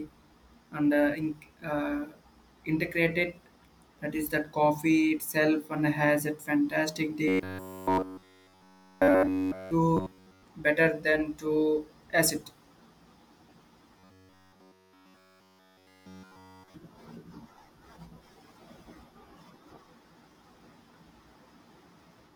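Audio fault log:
7.28–9.71 s, 9.97–10.43 s and 14.0–16.74 s, robotic sound from repeated short buffers: right after "and has a fantastic", again just before "better than to acid", and later in the clip, the speech collapses into a rigid, metallic buzz fixed at 93.8 Hz that only loosely tracks the words. Essentially all of each stretch is looped material, likely because audio arrived too seldom and the same slice of roughly 10.7 ms was replayed over and over, imposing that buzz as a fixed pitch.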